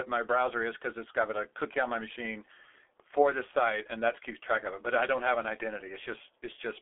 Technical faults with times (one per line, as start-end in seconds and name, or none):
0.00-6.82 G.723.1 codec